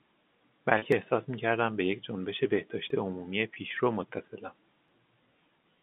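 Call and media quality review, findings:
Packet loss with pitch repetition at 0.78 s (40 ms, fits two lost packets) and 3.54 s (20 ms): brief held buzz from a repeated pitch period, not a clean skip.

Audio missing between chunks at 0.92, 2.90 and 4.88 s: a skip of roughly 20 ms every 2 s, no buzz, likely chunk-boundary loss in the recorder. The narrowband telephone band is audible throughout.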